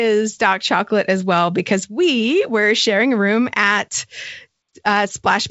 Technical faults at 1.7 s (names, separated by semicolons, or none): none